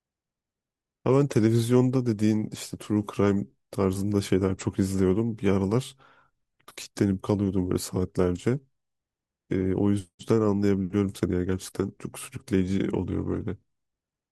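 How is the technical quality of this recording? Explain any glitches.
No glitches or technical faults can be heard anywhere in this speech recording.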